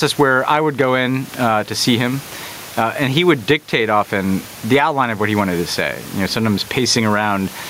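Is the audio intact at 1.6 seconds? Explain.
No, gain pumping runs throughout, including 1.6 s: likely an overdriven input with a fast limiter, so the gain swings around 15 dB and the speech sounds squashed, loud and soft parts closer in level.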